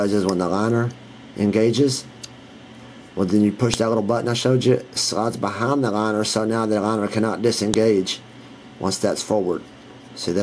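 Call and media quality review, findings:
Sharp, loud click at 3.74 s and again at 7.74 s, each a couple of milliseconds long, spaced 4.0 s apart regardless of the underlying signal. File header played as audio: concatenation or streaming stage joined WAV pieces of 4.0 s each without stripping headers, so the header bytes decode as PCM samples and produce a snap at every piece boundary. Probable component: chunk assembler or stream writer.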